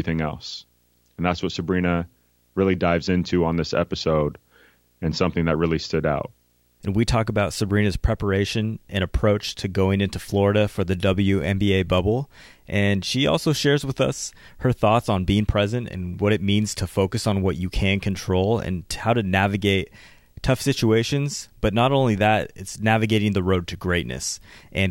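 It's a speech recording with video or display buzz running under it the whole way through. There's a low buzz at 59.94 Hz, the field rate of an NTSC-style picture, with hash riding on top, plus a thin whine up at 15.7 kHz from the line scan. It sits roughly 40 dB below the speech, so it's quiet. It's a screen or video cable leaking into the audio path.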